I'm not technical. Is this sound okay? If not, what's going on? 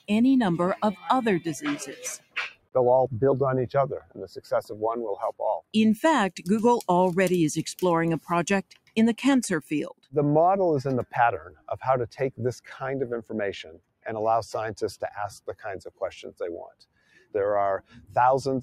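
No. A noise suppressor built for speech seems to have been left running, so it treats steady parts of this sound as background noise. Throughout, held tones and fading tails get pulled down while sharp starts slip through, which makes the level pump and sound thin. Unlike a plain volume change, the dips follow the sound itself, hitting sustained parts and sparing the sudden ones.

The clearest spots where the suppressor cut the sound are around 1.8 to 2.8, 4.0 to 4.8, 8.6 to 9.0, 11.4 to 11.7, 13.6 to 14.1, 15.4 to 15.7, 16.7 to 17.3 and 17.8 to 18.2 seconds. Here the sound sinks sharply for a fraction of a second to under a second. Unlike a dropout, it never goes fully silent. It just fades well below its neighbours and then comes back.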